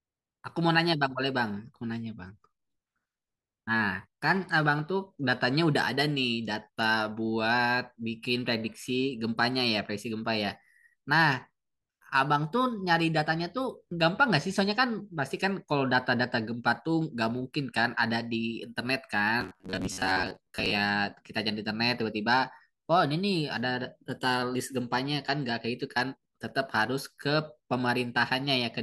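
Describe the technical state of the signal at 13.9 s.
At 13.9 s the speech signal is intact, with no audible dropout, clipping, glitch or other technical fault at that moment.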